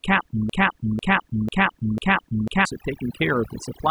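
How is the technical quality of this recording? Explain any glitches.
The recording has two clear problems: heavy processing over the whole clip and a stuck, repeating section early on.

Overdone noise removal runs throughout. A noise reduction stage set far too aggressively is cutting individual frequency bands whenever they sit near its noise estimate, taking the quieter parts of the speech with them. Pauses drop to near silence dotted with twinkling specks.

A broken-record loop runs from 0.50 to 2.65 s. A fragment of about 0.5 s (495 ms) plays four times back to back, identically, likely because the player or stream stalled and kept resending the last chunk it held. Whatever should have been heard during that stretch is lost.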